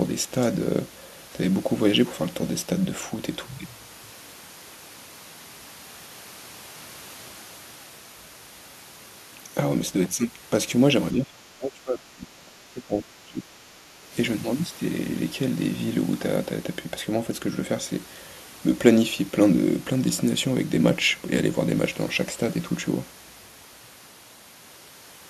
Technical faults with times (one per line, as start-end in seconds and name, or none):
11.12-14.12 speech suppressed in double talk